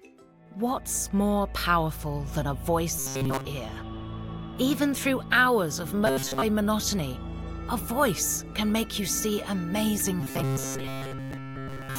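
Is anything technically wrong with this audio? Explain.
Yes. Robotic sound from repeated short buffers occurs at 2.99 to 3.45 s, 6.07 to 6.42 s and 10.21 to 11.99 s. Each turns rigid and metallic, with a fixed 134 Hz buzz. The likely cause is a roughly 7.5 ms chunk replayed while new audio is skipped. The first and last passages are entirely repeats, the middle one mostly.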